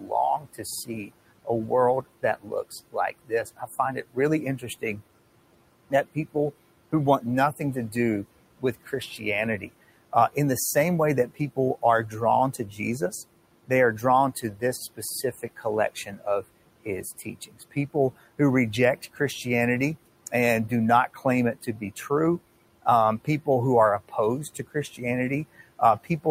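Speech runs through a noise suppressor that leaves noise suppressor artifacts for the whole clip. The room noise, sitting about 19 dB below the voice, is pushed down by about 18 dB in the gaps and then swells back under each phrase. On a spectrogram the background shows as a mottled, patchy floor that brightens beneath the speech and darkens between phrases, rather than as an even band. The suppressor also produces speech cut by the noise suppressor at scattered points from 0.0 to 26.26 s, around three seconds in all. There it mistakes quiet parts of the speech for noise. Soft consonants and trailing word endings are pulled down by as much as about 18 dB and sound swallowed or faint. In the waveform the tails of words drop abruptly toward the floor instead of fading out. On the spectrogram, faint high-frequency consonant energy is clipped away at those moments.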